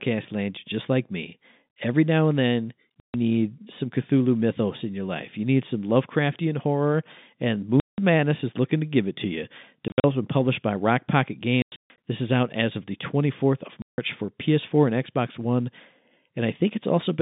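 A speech recording over a telephone-band line that is chopped by packet loss filled with silence. Hard-edged gaps fall at 3.0 s, 7.8 s after "horror and", 9.88 s after "give it to you", 11.62 s before "this is out as", and 13.82 s. They last 140, 180, 120, 260 and 160 ms. Each length is a multiple of 20 ms, which fits 20 ms packets. The receiver played silence for missing packets. The G.711 line stops near 3.7 kHz.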